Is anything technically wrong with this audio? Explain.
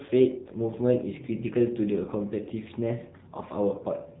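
Yes, the whole thing has gone through the AMR narrowband mobile codec. Nothing above 3.8 kHz survives, and the voice sounds plainly buzzy and synthetic, which fits a low bitrate of about 7.4 kbps.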